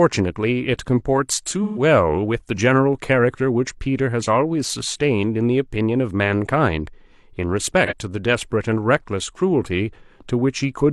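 AAC frame loss with concealment at 1.63–1.82 s and 7.86–7.93 s: missing compressed frames were patched from the last good spectrum. The 128 ms gap, fitting three frames, sounds smeared and noisy; the 43 ms one, fitting one frame, is a brief phasey blur.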